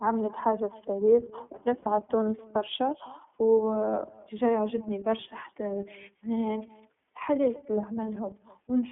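Echo with no canceller runs through the whole clip. The far end's loudspeaker feeds its microphone and nothing removes the pickup, so every phrase returns roughly a third of a second later as a faint, thin copy about 25 dB below the speech.

The iLBC codec also colours the entire clip. The line passes only about 150 Hz to 3.4 kHz, and the speech sounds plainly rough and slightly synthetic. The frame timing fits iLBC's 30 ms, 13.33 kbps mode.

Lost iLBC frames show up from 1.83 to 1.87 s as a brief gap of about 30 ms, consistent with a single dropped frame. The decoder fills it by repeating the last pitch cycle mixed with noise, giving a short buzzy held sound before the speech recovers almost at once.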